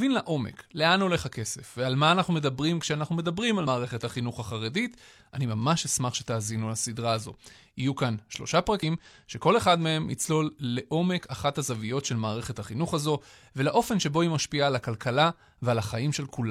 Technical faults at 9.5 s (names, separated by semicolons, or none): none